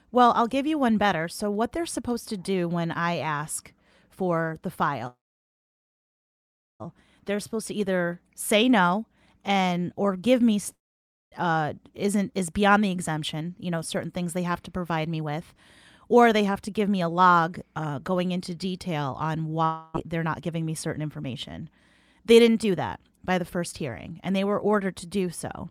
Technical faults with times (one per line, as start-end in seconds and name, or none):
5.07-6.82 call audio freeze
10.73-11.34 long network dropout
13.33-17.16 jitter buffer speed-up
19.64-19.96 long network dropout
20.24-25.06 jitter buffer speed-up